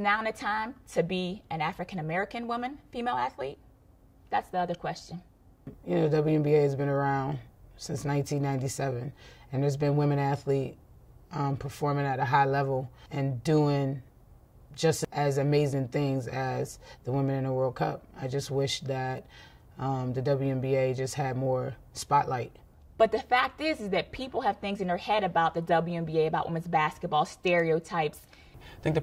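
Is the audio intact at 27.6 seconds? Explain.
Yes, the audio is intact at 27.6 seconds, with no dropout, click, distortion or other fault at that point.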